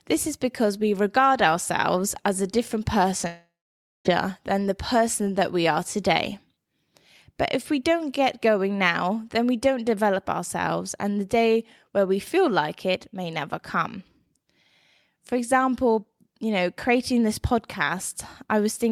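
It's a speech clip, and right after "ourselves as a different" at 3.17 s there's short concealed packet loss: about 20 ms of audio didn't arrive in time, so the decoder stretched the last sound over the gap and blended back, leaving a quick smear around 3.21 s. Then from 3.27 to 4.07 s there's a long network dropout, likely from the connection stalling. Nearly 0.8 s of audio is gone. The receiver first carries the last sound forward as a fading buzz or hiss, then goes silent for roughly half a second, and speech picks up again at "than the person that" with the missing stretch simply skipped.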